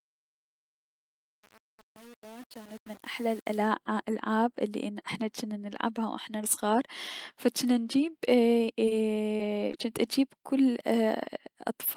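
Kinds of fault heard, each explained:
Truncation distortion on a fade: The fade-in over the first 3.58 s, up to "الألعاب الي احنا جنا", is computed with too few bits and no dither, which fits a gain stage keeping about 7 bits. As the speech rises from near silence, its quietest parts collapse into coarse steps, sounding gritty. A clean fade would only get softer, with no added grain.
Short concealed packet loss: At 8.85 s, 9.37 s and 9.71 s, about 20 ms of speech never arrived. Each gap was patched for 13 to 23 ms by extending the preceding sound, then blended back into the real audio. Each is heard as a brief smear or wobble, the last two just before "جنت اجيب كل". Unlike a stall, a slice of speech is actually gone, so a short sound can be clipped.
Short stall from a late packet: At 8.89 s, directly after the first loss, a packet arrived about 23 ms late and the receiver's buffer ran dry. 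The last sound was held for about 23 ms, and the audio then resumed where it had left off. The result is a slightly drawn-out moment with a faint buzz or dip in level. Unlike concealed packet loss, no speech goes missing, and the timing is only stretched.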